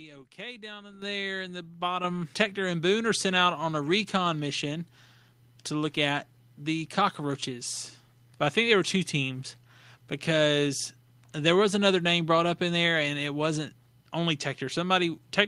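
At 1.02 s, 2.04 s and 3.06 s the microphone volume steps up by about 10, 7 and 2 dB. Automatic input gain lifts the speech and background together.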